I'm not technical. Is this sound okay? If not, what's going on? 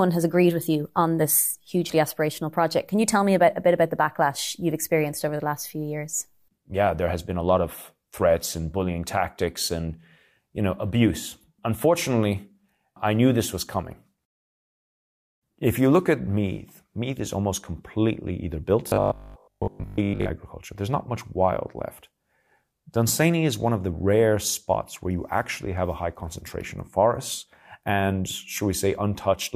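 No. From 18.88 to 20.32 s the speech turns into a robotic sound from repeated short buffers, a flat metallic buzz at 50 Hz, likely from tiny audio slices replaying instead of going silent.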